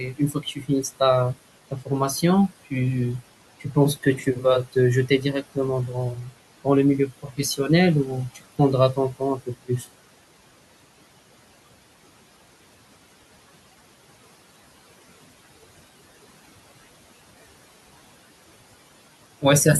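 A speech recording carries noise suppressor artifacts throughout: the room noise, about 19 dB below the speech, is pulled down by about 17 dB between phrases and swells back under them. Unlike steady hiss, it pumps with the talker. Speech cut by the noise suppressor occurs at 0.13–0.69 s, 1.71–1.89 s, 7.23–7.39 s and 9.39–9.86 s. Soft speech sounds, only a fraction of a second in total each time, sink by about 13 to 19 dB. They sound swallowed rather than clipped or dropped out.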